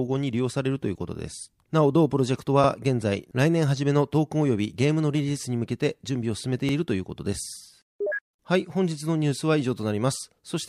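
A brief stutter at 6.69 to 6.74 s, where a 48 ms slice of the speech plays twice in quick succession. This is overlapping chunks: the audio was handled in 4.0 s blocks, and one block began before the previous one had finished, duplicating the seam.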